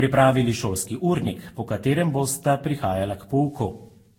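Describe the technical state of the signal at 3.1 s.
At 3.1 s, as throughout, the speech carries generation loss, likely from about ten lossy re-encodes near 60 kbit/s. It sounds swirly and hollow, with smeared attacks. A spectrogram shows a cutoff at 16.7 kHz.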